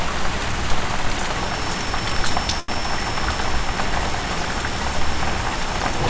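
At 2.60 to 2.82 s there's a short stall from a late packet: a packet didn't arrive in time, the jitter buffer ran dry, and the receiver stretched the last sound by about 84 ms. Nothing's lost, it just hangs briefly with a faint buzz or dip. The G.722 call path cuts off everything above 8 kHz throughout.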